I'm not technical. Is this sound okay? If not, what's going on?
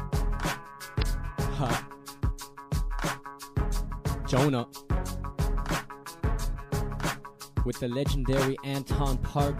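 No. At 0.98 to 1.03 s there's a brief glitch from damaged data in a compressed stream: a spoiled patch of the file garbled the playback.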